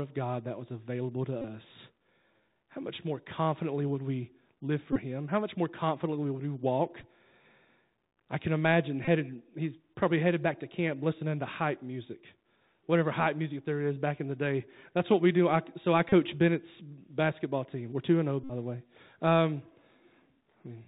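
The whole clip of speech runs through the Bluetooth CVSD headset codec, at 64 kbps, and you can plainly hear it. The band stops around 4 kHz, s sounds come out scratchy, loud bright bits distort as the one-bit step can't keep up, and there's a grainy hiss underneath.

Then there are Bluetooth headset packet repeats, where the headset link dropped audio and the chip replayed the last packet over and over. They come at 1.42–1.44, 4.93–4.99, 7.01, 9.05–9.08, 16.09–16.12 and 18.44–18.52 s. Each is a short buzz near 267 Hz from the 3.75 ms repeat. The last one, lasting about 60 ms, is the longest.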